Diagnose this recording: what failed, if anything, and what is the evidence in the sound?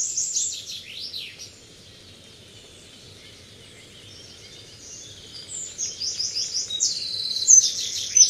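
Nothing in the audio stood out as a fault on listening.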